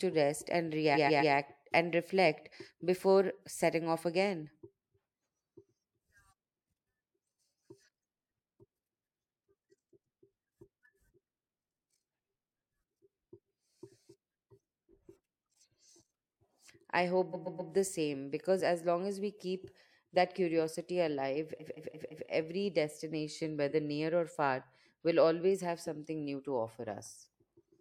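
Speech with repeated frames at three points: from 0.94 to 1.32 s after "rest and", a 128 ms chunk plays three extra times (a run of about three compressed frames); at 17.32 to 17.71 s, before "the same because as", the same again; and at 21.59 to 22.27 s after "keep that curiosity alive", a 171 ms chunk repeats four times. The stutter adds about 1.45 s in total. On a waveform or spectrogram, identical blocks sit side by side.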